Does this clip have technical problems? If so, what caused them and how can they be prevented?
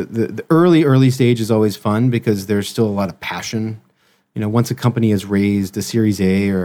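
No, nothing on this speech recording calls for a fix or any change to how it was captured.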